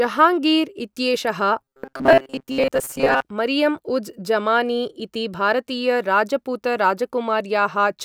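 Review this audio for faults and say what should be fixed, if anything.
From 1.61 to 3.23 s the speech becomes a rigid, metallic buzz near 134 Hz: robotic sound from repeated short buffers. The likely cause is input arriving too seldom, so a segment of about 7.5 ms is looped in place of most of the real audio. Keeping the audio stream supplied on time, with sufficient buffering and real-time priority for the audio thread, prevents this.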